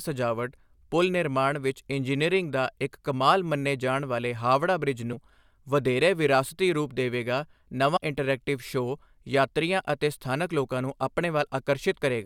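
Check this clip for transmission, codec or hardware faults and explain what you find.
Two compressed frames skipped faults occur, at 5.12 to 5.14 s and 7.94 to 7.98 s. Each time, the speech jumps ahead by around 70 ms. Whole frames never reached playback.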